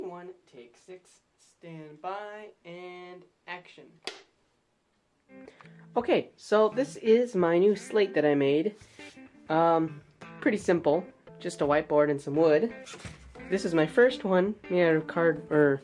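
No audible technical faults are present anywhere in the recording.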